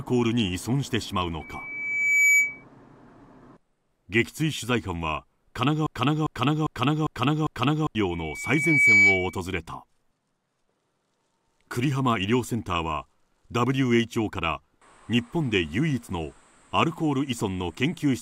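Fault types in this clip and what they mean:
Loudspeaker feedback squeal: A single 2.3 kHz tone swells to about 10 dB above the sound, building over roughly a second at 1.4 s and faster at 8.1 s. The microphone picks up its own loudspeaker, so that frequency keeps amplifying itself around the loop.
Broken-record loop: From 5.86 to 7.95 s, a 0.4 s fragment repeats exactly, back to back, five times, and the audio that belonged there is lost. This is likely a stalled player or stream resending the last piece it held.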